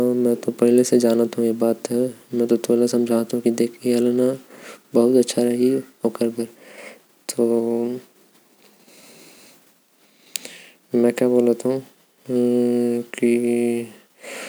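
No technical faults can be heard anywhere in the speech recording.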